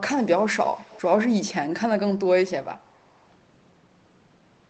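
From 0.64 to 1.09 s there's an echo leak: a faint copy of the speech comes back about 406 ms late, well below the main level. It's likely a loudspeaker on the far end whose echo canceller let part of the mic pickup through.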